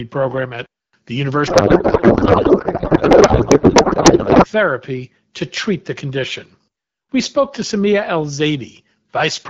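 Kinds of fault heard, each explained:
Codec payload misread: from 1.47 to 4.47 s the speech gives way to garbled noise and warble that barely tracks it. The decoder unpacks AMR wideband frames sent octet-aligned as if they were bandwidth-efficient, so every field lands in the wrong place.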